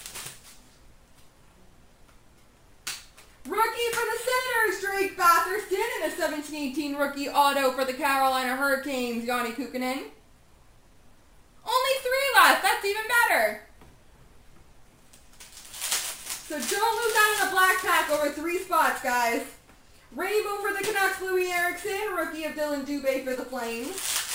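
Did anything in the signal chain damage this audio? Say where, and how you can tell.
Yes. The damage happened at a sample-rate conversion step. The audio was raised from a 24 kHz rate to 48 kHz by holding each sample twice instead of interpolating through a proper anti-imaging filter. The result is imaging from sample-and-hold upsampling across the whole clip: a mirrored copy of the content sits between 12 and 24 kHz at about 17 dB below the signal. It is heard as a bright, metallic fizz that rises and falls with the sound.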